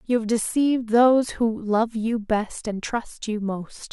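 No audible technical faults.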